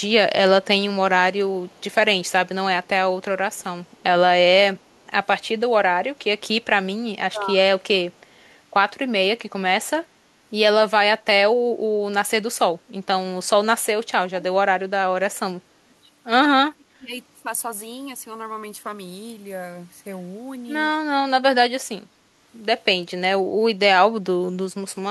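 Faint, delayed copies of the speech trail behind the talker at 1.66–1.95 s, 3.55–3.63 s and 3.98–4.03 s. They sit roughly 35 to 40 dB below the voice and arrive about 0.31 s late, each time with the same lag. This is an echo leak: the far end is likely playing the call on a loudspeaker, and its echo canceller let short scraps of what its microphone picked up pass back down the line. Later the talker's own voice sags and breaks up in pieces at 7.32–7.6 s, 14.29–14.53 s, 15.04–15.9 s, 16.63–17.1 s and 17.41–17.45 s. The drops range from a mild dip of around 10 dB to near-silence, at roughly 35 dB down around 16.6–17.1 s, with the longest stretch near 15–16 s. This is speech suppressed in double talk, likely caused by an echo canceller that could not tell the talker from loudspeaker echo while both sides spoke and turned both down.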